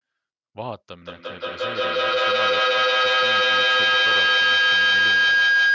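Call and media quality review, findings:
Feedback howl, 0.99 s to end: swelling tone around 1.5 kHz, loop repeat roughly every 200 ms, up to about 17 dB over speech. Mic-to-speaker loop between co-located call devices; each pass gains level, loop never broken. Call mic processing: band tops out at 8 kHz.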